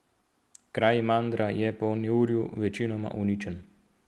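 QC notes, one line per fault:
No faults found in this clip.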